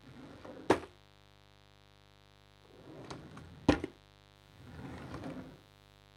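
A steady, raspy mains buzz sits under these everyday sounds for the whole clip, about 25 dB below them. Sharp switching spikes twice per 50 Hz cycle spread harmonics up into the kilohertz range.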